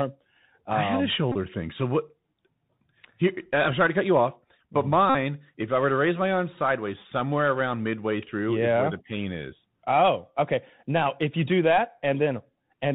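Speech recorded through a Bluetooth CVSD headset codec, with plainly audible damage that fits a 64 kbit/s CVSD link. On a spectrogram everything stops at a hard ceiling near 4 kHz, a granular hiss fills the floor beneath the speech, and loud high-frequency sounds smear into scratchy distortion where the adaptive step size can't keep up. Bluetooth headset packet repeats occur at 1.32–1.36 s and 5.10–5.15 s. Lost packets were replaced by decoding the previous packet again. In the first event, about 26 ms is lost, scattered over 30 ms, with the longest run around 15 ms. The second event is a continuous 49 ms. Each repeat recurs every 3.75 ms, producing a steady buzz near 267 Hz. On the waveform this shows as identical short segments copied back to back. On the spectrogram it shows as evenly spaced horizontal comb lines at 267 Hz intervals.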